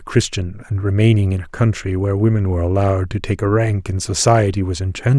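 Listening to the speech in this clip, nothing stood out as a technical problem.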